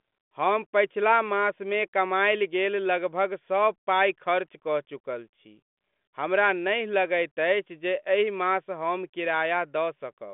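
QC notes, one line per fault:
No faults found: the speech rides a G.726 ADPCM line band of about 200 Hz to 3.5 kHz with nothing above 3.7 kHz, coding damage faint at most, consistent with the 40 kbit/s rate.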